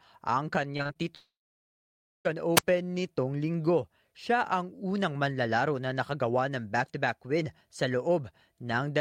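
Between 0.77 and 0.97 s, repeated packet loss (robotic sound) occurs: four short gaps, the longest about 21 ms, are each patched by stretching the preceding sound. Around 80 ms is missing, and the concealment fills nearly 40 percent of the stretch, so the speech turns choppy.

From 1.15 to 2.27 s there is a long network dropout. The likely cause is that no audio reached the receiver for over a second. The receiver carries the last sound forward briefly as a fading buzz, then roughly 0.9 s of silence follows, and the speech resumes with that stretch simply gone.

At 2.56 to 2.63 s comes a wireless microphone squelch dropout. The radio link weakens until the receiver's squelch mutes the output for about 47 ms. A short burst of hiss gives way to a near-silent hole, and the speech returns on "nitong linggo".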